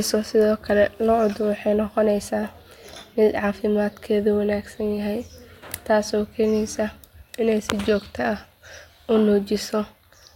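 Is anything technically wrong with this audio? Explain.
No, nothing is technically wrong.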